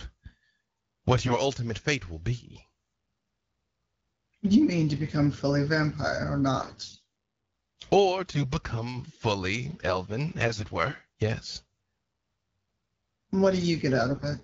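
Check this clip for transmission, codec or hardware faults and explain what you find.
Yes, there's one kind of fault here: AMR bit errors, in five short bursts, heard through wideband AMR coding that sounds consistent with about 12.65 kbit/s.

The bursts sit at 1.26–1.37 s, 6.59–7.03 s, 8.30–8.50 s, 10.46–10.63 s and 14.09–14.25 s. Flipped low-priority bits misplace the excitation pulses and skew fine pitch, gain and spectral values, so the speech keeps roughly its pitch and level but goes hoarse and gargly. The roughest patches are at 6.59 s and 14.09 s.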